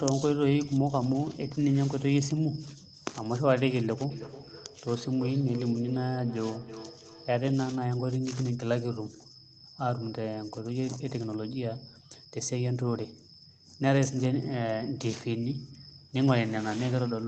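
From 4.1 s to 7.43 s the speech comes back at itself as a thin, ringing repeat roughly a third of a second behind, at most about 15 dB below the direct speech. This is feedback echo between two devices: two devices in the same room are on the call, and one plays out what the other's microphone sent. That microphone picks the playback up and sends it again, and neither echo canceller removes it, because each only cancels its own device's output.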